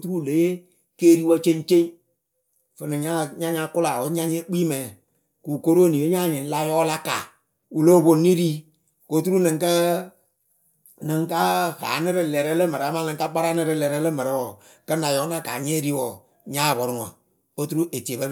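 No technical faults are audible.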